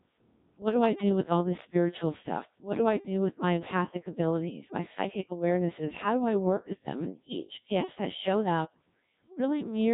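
The speech has been squeezed through the Codec 2 vocoder for the whole clip, at a rate the sound suggests is around 1.3 kbit/s. Instead of keeping the waveform, the decoder rebuilds each moment from sine waves using only pitch, voicing, energy and a coarse spectral envelope. The damage is heavy: the voice comes out robotic and buzzy, with a synthetic tone, and natural detail between the harmonics is lost.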